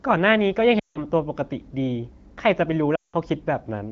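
Lost AMR speech frames: radio errors corrupted runs of wideband frames, so the decoder repeated the last good pitch and vocal-tract settings while lowering the gain. From 0.79 to 1.01 s and 2.95 to 3.14 s, speech fades quickly toward silence, then returns weak or rough.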